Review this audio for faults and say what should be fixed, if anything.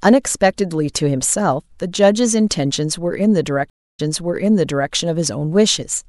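A stream reconnect occurs between 3.70 and 4.93 s. The speech stops dead for about 0.29 s while the connection drops and the player restarts its decoder, then resumes 0.94 s earlier than where it broke off, so a stretch of speech is heard twice. That repetition tells it apart from a plain dropout or packet loss, which leave a gap but never replay material. Buffering enough on the client and resuming from the exact byte offset would prevent this.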